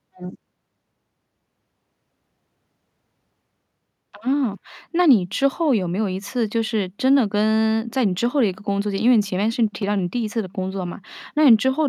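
Nothing stood out as a technical fault on listening to this speech recording.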